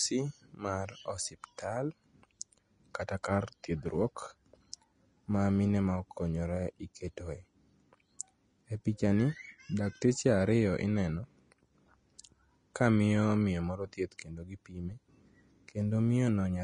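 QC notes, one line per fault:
Throughout, Vorbis compression. Nothing is heard above 10.6 kHz, and the speech sounds hissy and grainy. The damage is plainly audible. The likely cause is a low-quality Vorbis encode, which fits about 33 kbps. Its coarse treble quantising turns fine detail into noise.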